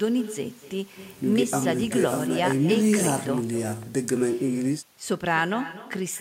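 A speech clip with echo with no canceller throughout: every phrase returns about a fifth of a second later, roughly 14 dB down and thinner, picked up from the far end's loudspeaker.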